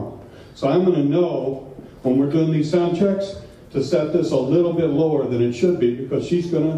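Nothing in the signal suggests a technical fault at any point; level, continuity and timing hold steady across the whole recording.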